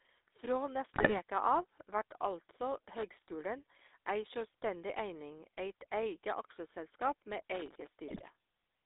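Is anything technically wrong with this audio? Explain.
Yes. The whole speech clip carries the GSM full-rate codec: band-limited to roughly 300 Hz–3.7 kHz, the vocal tract modelled with sparse pulse excitation, sounding buzzy and gravelly; the spectrogram shows nothing above 4 kHz.

GSM bit errors strike from 0.94 to 1.18 s and again from 8.08 to 8.23 s: corrupted filter, pitch and gain values produce squawks and gargling, seen as smeared spectra and sudden level spikes.

Loose connector crackle from 7.54 to 7.87 s: an intermittent contact chops the signal into irregular scratchy bursts, visible as dense vertical clicks on the waveform.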